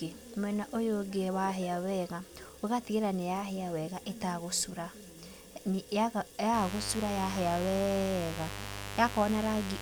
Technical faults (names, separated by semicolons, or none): mains buzz